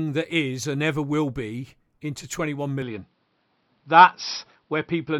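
Input switched to a poorer device at 2.82 s, running to the end of this speech clip. With no gap, the sound abruptly narrows to nothing above 5.7 kHz, shifts moderately in level and gains a faint new noise floor, likely from recording switching to a lower-bandwidth microphone.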